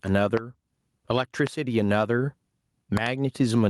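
A speech recording whose level never sits still: the whole clip sounds squashed, with loud and quiet moments pressed close together. This is gain pumping, with the level swinging by roughly 15 dB. The likely cause is input gain set far too high for the microphone, with a fast limiter or compressor clamping down on each loud sound and releasing in the gaps. On top of this sit loud pops: a single sharp pop from 0.37 to 0.39 s standing about 25 dB above the speech, another at 1.47 to 1.49 s about 20 dB above it, and a quick double pop between 2.97 and 3.09 s, also about 20 dB up. The speech continues underneath each one. These are likely sudden voltage steps or pulses, from a plug, a switch, static discharge or a driver glitch, that the following circuitry shapes into short thumps.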